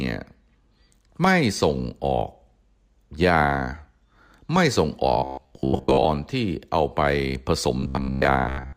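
A speech clip in which audio likely arrived too seldom, so the playback side kept looping its last short buffer, about 15 ms long, while most of the real audio in those spans was skipped. The result is robotic sound from repeated short buffers from 5.18 to 6.05 s and again from 7.80 to 8.76 s. A fixed 66.8 Hz buzz runs through these spans, leaving a rigid, metallic drone that only loosely follows the speech.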